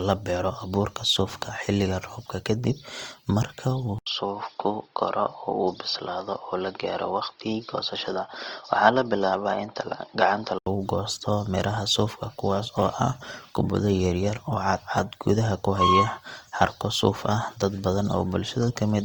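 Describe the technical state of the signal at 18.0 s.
At 18.0 s the speech sounds grainy and rough, with a noisy texture laid over the tones instead of any swirling or watery character, and this damage is plainly audible here as it is across the whole clip. The likely cause is Opus compression in its music (CELT) mode at a low rate, one that fits roughly 24 kbps. With too few bits, the encoder keeps each band's energy but fills the detail with folded or noise content, hence the grit. Bandwidth stays full, with nothing above about 20.2 kHz.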